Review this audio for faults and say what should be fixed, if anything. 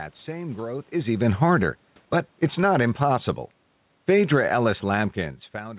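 Automatic gain falling appears twice, from 0.92 to 1.63 s (about 3 dB down) and from 2.44 to 3.02 s (about 5 dB down). The gain control judged the input too loud and eased its gain back. Speech and room noise sink together. Set the input level lower so the automatic gain control has no reason to back off.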